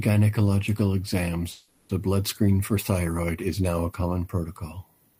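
At 1.51 s the speech stalls for about 0.4 s, ending at 1.91 s: the last sound is held and smeared into a fading buzzy hiss that never drops to silence, and then the talker resumes with "a blood screen for" exactly where they left off, with nothing skipped. This is a call audio freeze, likely caused by packets arriving late so the jitter buffer emptied and the receiver improvised 380 ms of filler, pushing the rest of the audio later.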